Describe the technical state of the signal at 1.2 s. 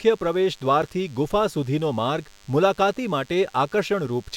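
At 1.2 s, as throughout the clip, a nearby DECT cordless phone or base station is transmitting a short radio burst 100 times a second, and the audio circuitry rectifies it. This is DECT cordless phone buzz: a thin, steady 100 Hz buzz rich in harmonics, sitting well below the speech.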